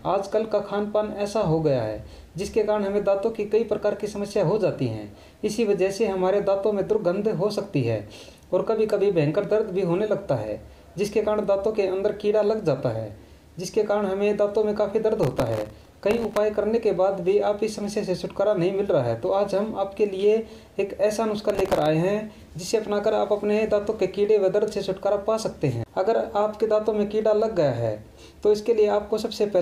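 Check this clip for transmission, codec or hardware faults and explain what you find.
Processor overload crackle at 15.23 to 16.37 s and 21.38 to 21.86 s. The processor repeatedly missed deadlines for very short buffers, around 1.5 ms. Each miss replayed a fragment of stale audio with hard edges, and dozens in a row form a gritty, tearing crackle.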